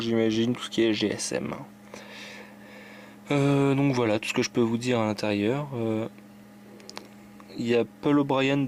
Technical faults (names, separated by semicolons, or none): none